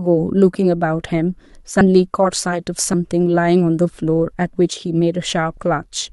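Compressed frames skipped at 1.81, 2.93 and 5.57 s: the decoder dropped whole frames of about 26 ms, so the speech jumps ahead as smeared blips, the first losing roughly 150 ms and the others about 50 ms.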